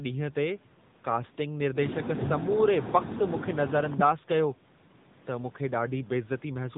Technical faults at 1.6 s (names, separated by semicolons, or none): AMR narrowband mobile codec